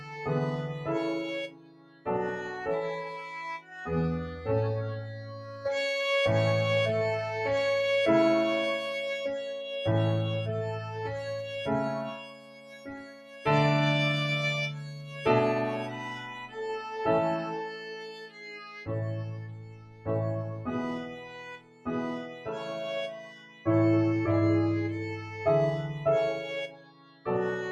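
A noise suppressor built for speech is applied to this sound throughout, treating sustained tones, room ambience and reverb as noise. Its gain swings by about 15 dB, so held material sinks after each onset while transients pass. The result is a pumping, thinning texture. A compressor ducks under loud peaks, but this pulls down whatever stays steady, and quiet tails fade out early instead of ringing naturally.

The same processing produces distinct sound cuts by the noise suppressor. These occur at 1.47 to 2.07 s (dropping about 15 dB), 11.45 to 13.46 s (about 15 dB), 14.88 to 15.25 s (about 8 dB), 17.67 to 20.08 s (about 12 dB), 21.04 to 23.66 s (about 15 dB) and 26.68 to 27.27 s (about 14 dB). In each, steady or fading sound sinks in level. Unlike a dropout, the level only dips and never goes fully silent.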